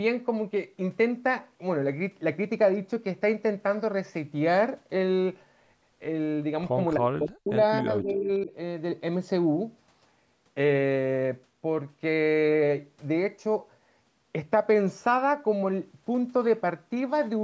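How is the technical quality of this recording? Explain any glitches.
The recording has two short dropouts close together, from 6.95 to 7.52 s and from 7.8 to 8.51 s. They are most likely speech suppressed in double talk. When both ends of the call spoke at once, the echo canceller apparently mistook the near talker for loudspeaker echo and attenuated the signal. The first dip is very deep, around 40 dB, so the voice nearly vanishes. The second is shallower, about 15 dB, and leaves it pushed back. The band-limit at 8 kHz from the call's microphone processing is normal.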